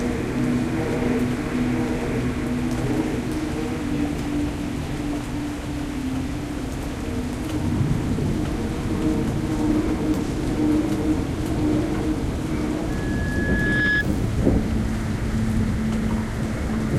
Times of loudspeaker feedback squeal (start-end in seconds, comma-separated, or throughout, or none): 12.89-14.05